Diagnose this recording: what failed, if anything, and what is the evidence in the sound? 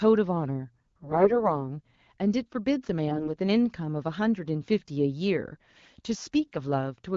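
AMR bit errors on the network link: from 1.02 to 1.62 s and from 3.08 to 3.28 s the speech keeps its pitch and level but turns hoarse and gargly. Flipped low-priority bits, around one in ten at worst, misplace excitation pulses and skew gain and spectral values in the AMR-WB decoder.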